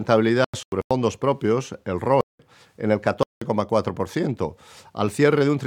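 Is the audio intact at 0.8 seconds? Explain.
No, 0.8 seconds falls inside a dropout from about 0.44 to 0.91 s. It's a corrupt frame muted fault: bits in a run of several compressed frames got flipped, the decoder rejected them, and the player filled the gap with silence. The sound cuts off abruptly at 0.44 s, and nearly half a second of dead air follows before it picks back up. The timing doesn't shift, so everything after the hole lands where it should.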